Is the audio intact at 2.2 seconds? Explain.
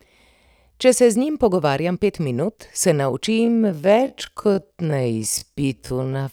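Yes, the speech at 2.2 seconds is intact, with no dropout, click, distortion or other fault to be heard at that moment.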